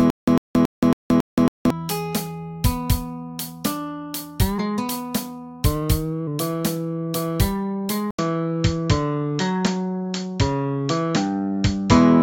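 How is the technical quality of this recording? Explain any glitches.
The recording has two clear technical problems: a stuttering stall at the very start and a drop in fidelity from just past the 8 second mark to the end.

Stutter with silent gaps, 0 to 1.70 s: the clip opens mid-stutter. A 101 ms burst of sound plays, then about 174 ms of dead digital silence, repeating every 275 ms, five times. This likely comes from a stalled player or stream that replays its last buffered fragment on each retry and then runs dry. Whatever should have played there is lost. On a waveform it shows as identical short blocks separated by perfectly flat lines. A spectrogram shows matching patches split by black columns.

Input switched to a poorer device, 8.11 s to the end: after an 80 ms silence, the sound turns duller and narrower, with nothing above 7.6 kHz. The loudness stays about the same. A faint new noise floor appears, roughly 55 dB below the signal. 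This is likely a change of input to a lower-bandwidth microphone or a headset call profile. On a spectrogram the upper frequencies vanish abruptly above a hard ceiling at 7.6 kHz, after a brief dark gap. The waveform shows that short flat dropout and little change in level.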